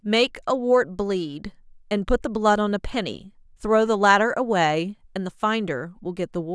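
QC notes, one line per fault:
No faults found on review of the speech.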